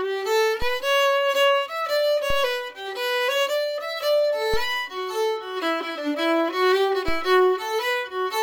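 A DC step shifts the waveform's zero line at 0.62, 2.30, 4.54 and 7.08 s, by about -19 dBFS and then about -17 dBFS, decaying through a 2 Hz high-pass, each heard as a low thump.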